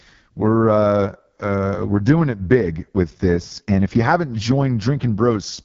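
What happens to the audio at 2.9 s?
At 2.9 s the speech is passing through the AMR wideband (HD Voice) codec, as it does for the whole clip, at a rate that sounds like the lowest one, 6.6 kbit/s. The heavily reduced vocal-tract model leaves the voice rough and raspy, with nothing above 7.2 kHz.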